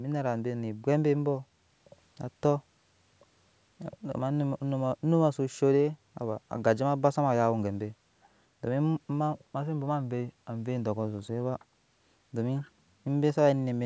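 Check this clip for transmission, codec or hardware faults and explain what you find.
No transmission, codec or hardware faults are audible in the speech: the signal shows only the expected marks of call microphone processing, with the lowest bass trimmed by its high-pass filter and nothing above 8 kHz.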